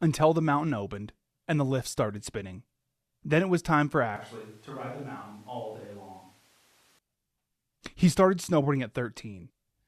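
Switch to a distant microphone in this speech clip from 4.16 to 6.99 s: the sound abruptly turns hollow, drops about 10 dB and gains room noise, likely from the close microphone's feed dropping out.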